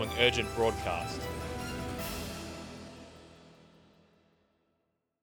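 No technical faults can be heard anywhere in the clip. Nothing in the audio calls for a timestamp or a closer look.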